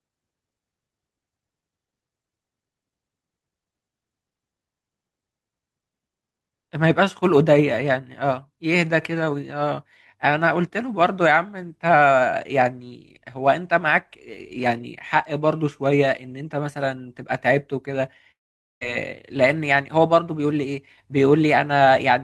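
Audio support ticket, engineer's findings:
Long network dropout, 18.31 to 18.83 s: the last sound smears into a fading buzz, then near-silence. Speech resumes with 500 ms lost. Likely packet loss on the Opus call path; jitter buffer concealment runs out and mutes.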